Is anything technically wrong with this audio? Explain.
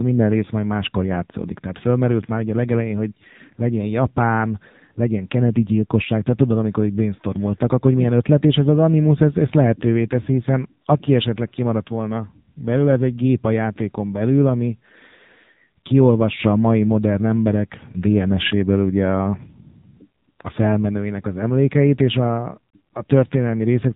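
Yes. Throughout the speech, an AMR narrowband mobile codec is at work. Nothing passes above about 3.8 kHz, and the voice sounds buzzy and synthetic. This heavy damage points to a low AMR-NB mode near 6.7 kbps, where a few pulses per 5 ms subframe must drive the vocal tract model.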